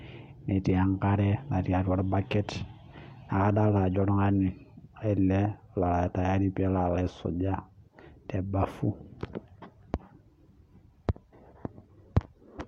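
No technical faults are audible.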